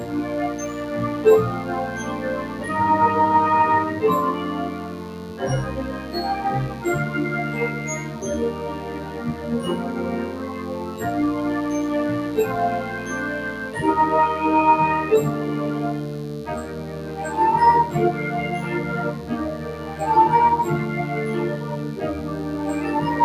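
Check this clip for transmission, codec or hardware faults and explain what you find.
Two faults run through the whole clip: mains buzz and a noise suppressor applied to music or sounds.

Mains buzz is present from start to finish, sitting roughly 25 dB below the signal. Switching spikes twice per 50 Hz cycle add harmonics up to several kilohertz, so it rasps. A smooth hum would carry only the low fundamental and its first few harmonics.

A noise suppressor applied to music or sounds also acts throughout. It treats sustained tones, ambience and decay tails as noise, pulling them down by around 10 dB while attacks pass, so the sound pumps and thins.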